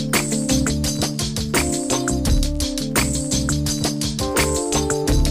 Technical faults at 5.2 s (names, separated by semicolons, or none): none